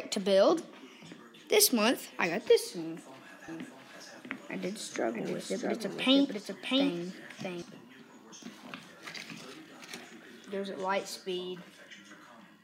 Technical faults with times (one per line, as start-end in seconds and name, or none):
3.48-7.62 doubled audio track